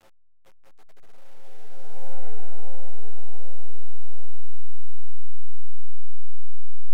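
A short sound clip with truncation distortion on its opening fade-in, which runs up to about 2.14 s. The gain stage is dropping bits without dither, which fits an 8-bit path, so the quiet start turns gritty, worst from 0 to 1.28 s.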